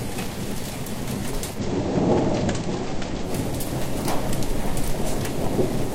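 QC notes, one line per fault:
1.51–3.32 s, digital radio blending to analogue: the receiver lost its digital stream and cross-faded over about 105 ms to the station's FM broadcast, then back. Faint hiss sits roughly 35 dB down, with no level change. Spectrogram shows a broadband noise floor across that span.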